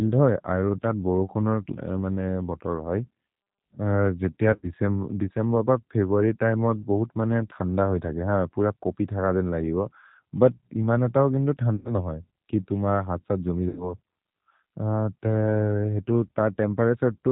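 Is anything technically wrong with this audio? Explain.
Yes, two things. The whole clip runs through a G.729 speech codec, the G.729A variant, and its sound fits an 8 kbit/s link. The codec rebuilds speech from a vocal tract filter plus a few pulses per frame, so everything above 4 kHz is gone and the speech comes out intelligible but plainly rough and a bit synthetic.

There's also VoIP packet loss concealed by the speech codec, at 4.53 to 4.71 s, 11.75 to 11.99 s and 13.69 to 13.93 s. Packets went missing, roughly 70 to 100 ms each time, and the decoder filled the gaps by stretching its last pitch and filter with falling gain. You hear a smeared buzzy tone or coloured noise that fades, and the speech stays weak for a moment after it resumes.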